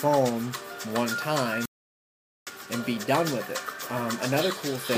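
A playback stall interrupts the audio at 1.66 s: the sound cuts out mid-flow and the output stays silent until 2.47 s, a gap of about 0.81 s, before sound returns. The break is abrupt at both edges rather than faded, which points to the output being starved instead of the content itself pausing. The likely cause is the player's buffer running dry or its audio thread being blocked for that interval.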